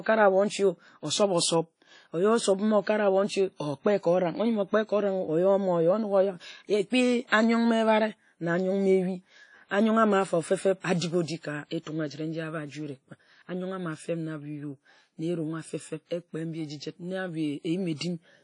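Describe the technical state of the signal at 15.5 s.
Ringing, washy speech with a hiss that breathes with the signal and nothing above 10.1 kHz, present throughout; likely WMA compression, its coarse quantisation noise smeared across long transform blocks.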